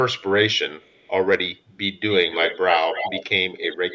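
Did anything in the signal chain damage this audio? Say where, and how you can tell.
Yes. At the call-processing stage, the far end's echo canceller likely failed to fully suppress its loudspeaker output, so part of this voice returned as a delayed echo. Faint echoes trail the speech by 322 ms from 0.18 to 0.32 s and from 0.79 to 1.1 s, sitting very far below the direct sound. From 2.1 to 3.25 s and from 3.58 s to the end, the delay shortens to 278 ms and the echo grows to roughly 10 to 15 dB below the speech.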